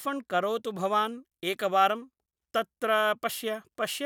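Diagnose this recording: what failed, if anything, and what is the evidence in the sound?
Pre-emphasis left on at the playback stage: from 0.42 s onward the speech turns thin and sibilant, with treble about 8 dB hot at 10 kHz, consistent with an unreversed CD 50/15 µs curve.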